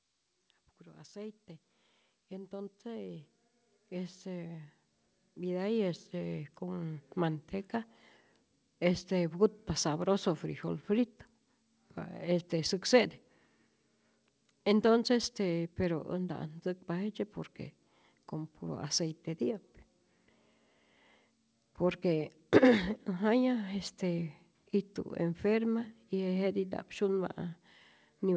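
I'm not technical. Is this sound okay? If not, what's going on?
No. From about 1.1 to 7.1 seconds, the speech and the background noise behind it both grow steadily louder together. That's automatic gain rising: the call's automatic volume control decided the sound was too quiet and kept turning it up.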